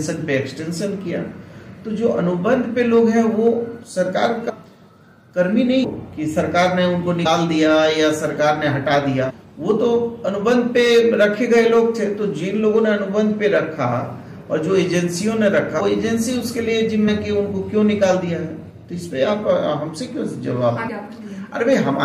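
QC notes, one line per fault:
4.48, 5.83, 7.25, 9.29, 15.79, 17.07 and 20.88 s, compressed frames skipped: the sound jumps ahead by roughly 0.1 to 0.7 s each time, consistent with whole frames of about 23 ms going missing.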